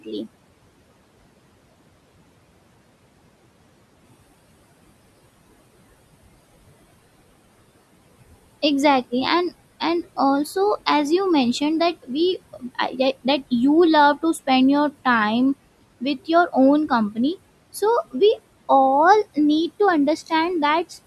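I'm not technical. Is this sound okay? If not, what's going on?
No, not quite. Two related problems come from the same source.

Noise suppressor artifacts run through the whole recording. A noise suppressor is a filter that tries to remove steady background hiss by turning down the parts of the sound it judges to be noise, many times a second. Here it pushes the quiet room background down strongly, so the background drops away in pauses and comes back under the talking.

Speech cut by the noise suppressor happens twice: right at the start, from 0.04 to 0.27 s, and again from 12.53 to 12.94 s. In those moments the filter mistook part of the speech itself for background noise and turned it down along with the background. Only part of each stretch is affected, but the sounds there come across as swallowed or fainter.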